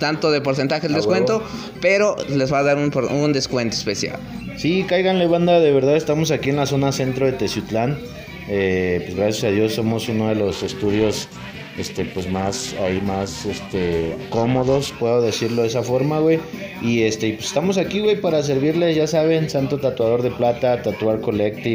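The sound carries periodic clock jitter from about 10.51 s to 14.95 s. Within that stretch it takes on a rough, metallic edge. The converter's sampling clock is being shaken by interference at around 500 Hz. That timing wobble places sidebands roughly 500 Hz above and below each component of the sound. Higher-pitched components come out more smeared than lower ones. The edge tracks the signal itself and drops away in quiet moments.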